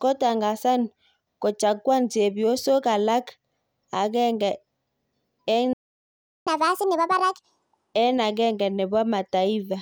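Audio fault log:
5.73–6.47 s, playback stall: the speech cuts off mid-flow and the output falls silent for about 0.73 s before resuming where it left off. The likely cause is the player running dry of buffered data or having its audio thread blocked, so nothing reached the output until it recovered. On a waveform this shows as an abrupt flat line between two stretches of signal; a spectrogram shows a clean vertical band of empty time across all frequencies.
6.47–7.94 s, catch-up at higher speed: right after the gap the speech runs at 1.5 times normal speed, sounding hurried and chipmunk-like, with pitch raised by around seven semitones, before snapping back to normal at 7.94 s. The player is resampling its backlog faster to win back the time lost in the stall, so tempo and pitch rise together. A spectrogram shows harmonics and formants shifted upward and syllables compressed in time; a waveform shows denser, shorter bursts.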